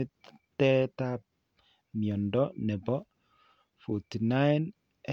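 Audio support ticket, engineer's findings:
No faults found on review.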